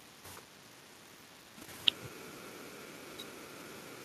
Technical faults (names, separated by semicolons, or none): none